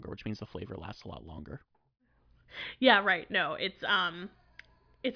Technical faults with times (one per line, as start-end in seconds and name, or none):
none